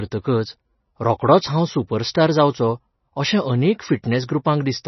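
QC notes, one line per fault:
Throughout: MP3 compression likely causes the hard treble cutoff at 5.9 kHz and the watery, swirly speech; the spectrogram shows a flat ceiling and flickering holes, fitting roughly 24 kbps.
2.11–2.15 s: pre-echo, a 39 ms smear of hiss ahead of an attack as block-wide quantisation noise fills the gap; the waveform shows noise rising before the transient.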